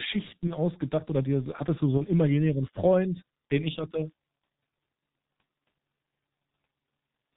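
A speech clip run through the G.723.1 codec at about 6.3 kbit/s, and it's heavily damaged. Nothing gets through above 4 kHz, so it's muffled and hoarse, and the slow-updating voice model smears the consonants together the whole way through. There are also two spots of VoIP packet loss concealed by the speech codec, each sounding like a single lost 30 ms frame. The first is at 0.47–0.52 s, just before "ausgedacht oder dir hattest", and the second is at 1.97–2.03 s, right after "dir hattest du so". In both, the decoder fills the gap by stretching its last pitch and filter into a fading buzzy tone or coloured noise, and the voice stays weak or distorted for a moment afterwards while it recovers.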